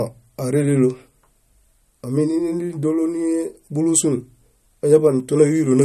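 Throughout the speech, likely MP3 compression: nothing above 12.5 kHz, watery swirling and metallic chirps on s sounds, unlike plain low-pass dullness, pointing to a starved bitrate near 48 kbps.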